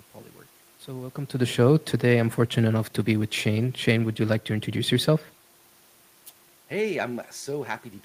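No technical faults are present.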